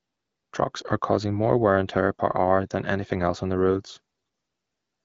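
From 3.68 to 3.99 s an AMR rate drop sets in. The link pushes the AMR-WB coder to a lower mode, which fits a step from 12.65 to 8.85 kbit/s. The speech keeps its full band with no gap, but turns rougher and more synthetic before clearing.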